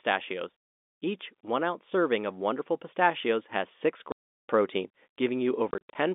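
Speech over a telephone-band line, narrowband from the G.711 coding, is chopped by dead gaps: one solid hole from 4.12 to 4.42 s, then a broken stretch from 5.71 to 5.95 s with gaps up to 50 ms. This is packet loss filled with silence, with holes that fit 10 ms packets.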